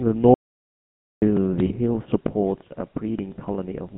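The whole speech clip goes through the GSM full-rate codec, so there's nothing above 3.4 kHz and that buzzy, gravelly roughness is plainly audible. From 0.34 to 1.22 s there's an audio dropout to silence, nearly 0.9 s of dead silence with no room tone, likely a lost input or link while recording continued. Then from 1.66 to 1.72 s, just before "hill supports a", lost GSM frames smear the sound into a short metallic ring for about 40 ms, which fits two dropped frames.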